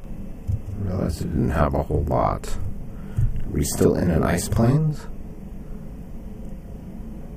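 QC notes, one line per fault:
Throughout, channel delay (doubling): one channel runs 40 ms behind the other, and when both are folded to mono the late copy lands at equal level, so every attack is heard twice as a tight slap echo, thickening and smearing the sound.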